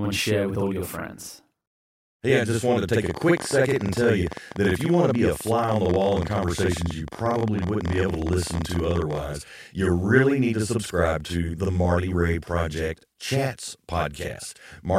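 One channel runs late by about 46 ms throughout, which fits a 2048-sample buffer, and the two channels are then summed to mono. This channel delay (doubling) means every part of the speech arrives twice at equal level. The second copy is far enough behind to be heard on its own, so consonants and word onsets carry a short slap echo and the whole clip sounds doubled rather than merely coloured.

From 3.06 s, right after "just wanted to take", until 9.14 s, just before "you really need to", a train of clicks rides over the sound. The likely cause is interference from nearby equipment or a faulty connection or power supply injecting short pulses. They arrive at about 12.4 per second in an uneven rhythm, around seventy in all, each of much the same shape and peaking roughly 10 dB above the speech. They are heard as a ragged ticking or popping that continues through the pauses.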